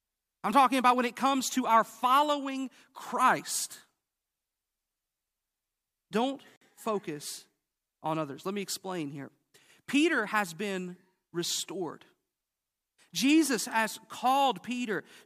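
At 6.56 s, just before "focus on others", a block of digital silence lasting about 52 ms cuts the speech abruptly. The sound cuts out and returns with no fade, leaving a short hole. On a waveform it appears as a flat line. A spectrogram shows a blank vertical gap bounded by thin broadband streaks.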